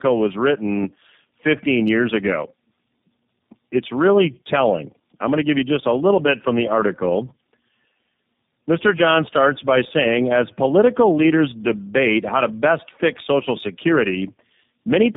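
Speech throughout, showing tandem speech coding: it sounds rough, muffled and warbly, as if decoded and re-encoded across links, consistent with three low-rate speech codecs in a row ending in G.729A. Each stage compounds the previous stage's damage, and nothing remains above 3.8 kHz.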